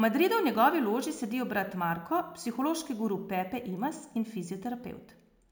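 From start to finish the speech carries imaging from sample-and-hold upsampling. Each original sample was simply repeated with no smoothing filter, which fits a 16 kHz recording raised to 48 kHz. That leaves a mirrored copy of the spectrum between 8 and 16 kHz at about 21 dB below the signal, heard as a bright metallic fizz that rises and falls with the speech. Unlike harmonic distortion, this fizz moves opposite to the pitch.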